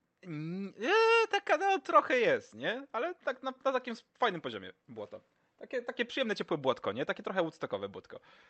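No technical faults can be heard anywhere in this speech clip. It has gone through a call path, and the top end stops at about 8 kHz, which fits a call codec such as Opus working in its wideband mode.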